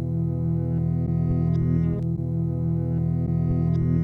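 Sound recording with no technical faults heard anywhere in it.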